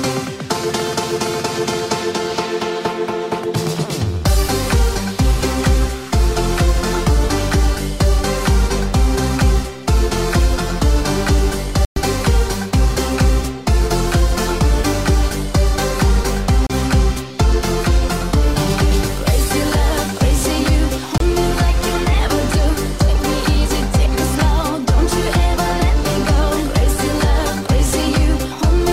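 The sound drops abruptly to silence three times, then resumes: at 11.85 s for about 112 ms, at 16.67 s for about 31 ms, and at 21.18 s for about 26 ms. The first gap is the longest hole, while the later two are brief ticks of dead air. These are likely Bluetooth stalls, where interference delayed packets, the headphones' buffer emptied, and playback halted until retransmitted data arrived.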